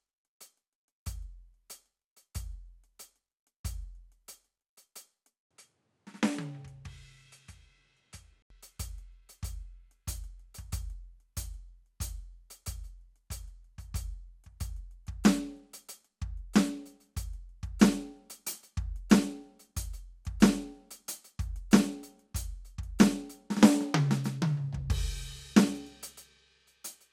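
At 5.43 s the music drops out for about 80 ms, then returns roughly 10 dB quieter, duller, with nothing above 11.8 kHz and faint new background noise underneath until 8.50 s. It sounds like the input likely switched to a poorer device for that stretch.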